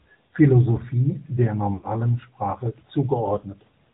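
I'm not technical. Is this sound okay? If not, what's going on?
No. This speech has gone through the AMR narrowband mobile codec, the squeezing used on older 2G and 3G phone calls. It throws away everything above 4 kHz, so the voice sounds muffled and boxy. It rebuilds the voice from a simple model rather than sending it whole. That is why it sounds buzzy and a bit artificial all the way through. The damage is easy to hear, not subtle.

There are also lost AMR speech frames, caused by radio errors on the call. When a chunk goes missing, the phone guesses it by repeating the last good sound and fading it down. From 1.74 to 1.92 s, about 100 ms of audio is missing. There the voice stretches out, fades, then returns weak or rough. Around 3.40 to 3.44 s a single short chunk is lost, giving a brief dip or warble.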